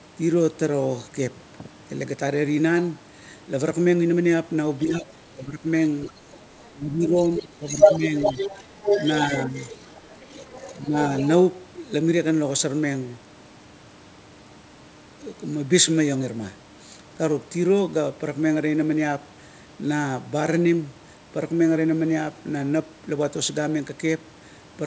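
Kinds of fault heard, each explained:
Speech suppressed in double talk: at 4.85–5.64, 6.10–6.14, 6.71–8.12, 9.46–9.55 and 10.84–10.96 s the main voice dips, by up to about 20 dB in the 6.71–8.12 s stretch. This likely happens because the echo canceller, hearing both sides at once, turned everything down.
Other side's voice leaking through: a second voice sits under the talker from 6.04 to 6.71 s, faint at about 20 dB down, then from 7.03 to 11.28 s at only about 5 dB below. This is likely loudspeaker sound the echo canceller failed to remove.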